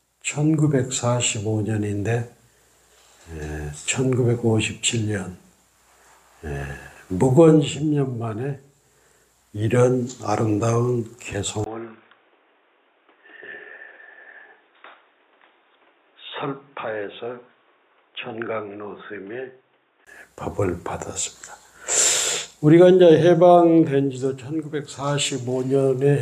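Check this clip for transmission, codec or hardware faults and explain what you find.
One fault: from 11.64 to 20.07 s the sound narrows to nothing above 3.7 kHz, drops by roughly 10 dB and gains a fresh noise floor, with a 20 ms gap at the switch. Likely the input switched to a poorer device. A new noise bed, level change and gap set this apart from a bandwidth-limited codec.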